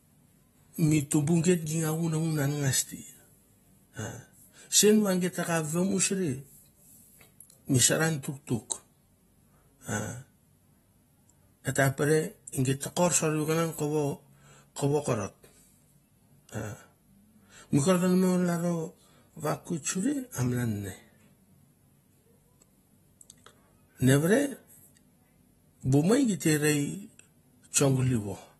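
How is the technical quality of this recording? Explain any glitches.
The technical quality is limited by plainly audible lossy compression across the whole recording.

AAC compression, throughout: the damage fits AAC-LC at a low bitrate, around 32 kbps. The encoder has likely discarded everything above 12.5 kHz and coarsely quantised what remains, so the speech sounds dull and smeared, with a warbly, fizzy edge on sibilants and sustained sounds.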